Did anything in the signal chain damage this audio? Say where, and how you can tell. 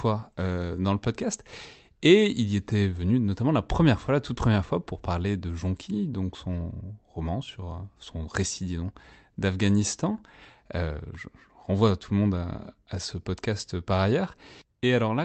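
No, nothing in the chain damaged this speech; it came through a normal call path, where the Opus coding at 32 kbps and the top end stopping around 8 kHz are just what that kind of link does.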